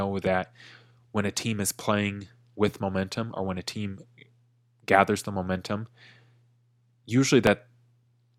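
At 7.47 to 7.49 s, an overlap between stream segments made the player trim 21 ms of sound that was never duplicated, leaving an audible tiny skip.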